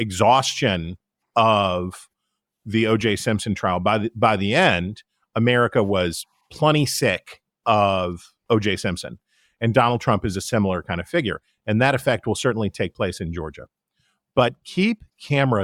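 No technical faults can be heard anywhere in the speech.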